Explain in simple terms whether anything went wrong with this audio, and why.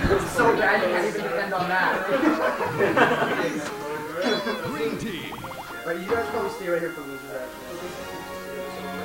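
Yes, something went wrong: the audio was stored with a low bit depth with dither, using what sounds like only 8 bits for each sample instead of the usual 16 or more. Before the sound was rounded to so few levels, a little random noise was mixed in. That trick avoids harsh distortion, but it leaves a steady, even hiss under the sound from the very start to the very end, and it is fairly loud compared with the sound itself.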